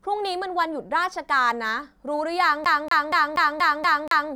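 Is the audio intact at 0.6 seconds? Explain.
Yes, at 0.6 seconds the speech plays through intact, with no audible dropout, click or other fault at that moment.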